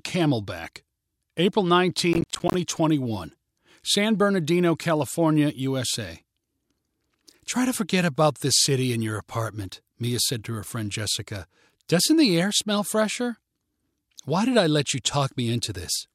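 From 2.13 to 2.54 s, the speech breaks into processor overload crackle. The processor fell behind and missed a run of buffer deadlines, around twenty of them. Each miss left a short hard-edged silent gap, which fits buffers of about 10 ms. Together they sound like gritty tearing.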